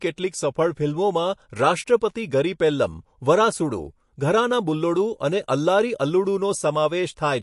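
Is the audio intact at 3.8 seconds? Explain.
No. At 3.8 seconds, as throughout the speech, the audio shows MP3 compression, likely from a low bitrate around 48 kbps. Short of bits, the encoder removes everything above 11.3 kHz and drops weak frequency lines, leaving plainly audible watery swirl, smeared attacks and dull treble.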